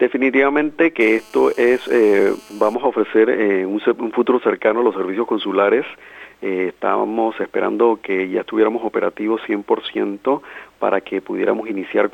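A GSM phone buzz sits under the audio from 1.01 s to 2.75 s: a hard, raspy tone at 217 Hz, dense with harmonics and unrelated to the program material, at about 27 dB below the signal. It holds steady across that span, consistent with a 2G handset on an active call nearby, whose bursts are picked up and rectified by the audio circuitry into an audible buzz at the burst rate.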